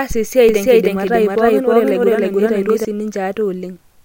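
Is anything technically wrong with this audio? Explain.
Yes. From 0.49 s to 2.85 s the speech has a doubled audio track: a second full-band copy about as loud as the original, trailing it by roughly 300 ms. The likely cause is the same signal reaching the mix twice, once through a slower path. Unlike a room echo, it is one clean repeat with no decaying tail or reverberant colour, and it switches on and off abruptly.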